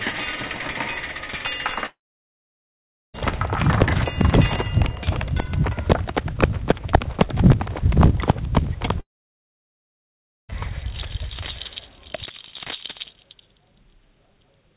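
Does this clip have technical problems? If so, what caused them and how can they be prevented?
Yes. A long network dropout is the likely cause: packets stopped arriving from 1.86 to 3.16 s and from 9.00 to 10.54 s, losing about 1.3 s and 1.5 s. Each time, the last sound is stretched into a brief fading buzz, followed by silence for about 1.2 s and 1.4 s. The audio then resumes with the missing part skipped. This happens over a G.711 call path that carries nothing above 4 kHz. A more stable connection, such as a wired link or less congestion, prevents these gaps.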